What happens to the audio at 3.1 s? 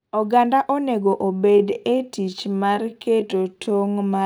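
At 3.1 s the speech is inside a time-stretched section that runs from 1.26 s to the end of the clip, slowed to about 0.64 times its original pace with the pitch unchanged. The likely cause is software lengthening the audio by repeating short pieces, which makes it drag. On a spectrogram, harmonics hold their frequencies while syllables stretch wider. The waveform shows drawn-out envelopes with repeated grain patterns.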